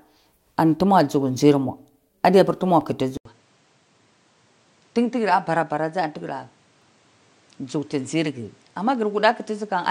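At 2.81 s, overlapping chunks: each 4-second processing chunk begins about 7 ms before the previous one ends, so that sliver replays, heard as a brief click-like stutter. At 3.17 s, the input likely switched to a poorer device. After an 80 ms silence, the sound turns duller and slightly quieter, with nothing above 9.6 kHz and a faint new noise floor. At 6.82 s, the next chunk join overlaps by the same 7 ms, producing another short stutter.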